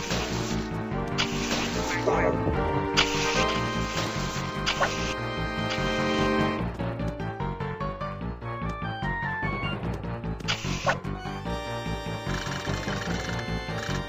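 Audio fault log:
No audible faults detected.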